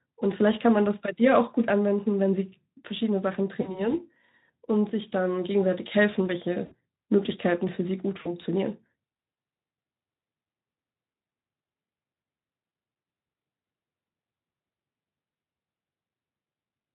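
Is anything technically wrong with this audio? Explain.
Yes. Over a VoIP link running the Speex speech codec, stretches of packets went missing and the decoder had to invent the gaps: VoIP packet loss concealed by the speech codec, at 3.61–3.94 s, 6.65–6.74 s, 8.21–8.33 s and 12.69–12.71 s. Lost spans of about 40, 60, 40 and 20 ms fit 20 ms codec frames. The decoder repeated its last pitch and filter at falling gain, so each gap becomes a brief buzzy or noisy, fading smear, and the sound stays thin for a moment after packets resume.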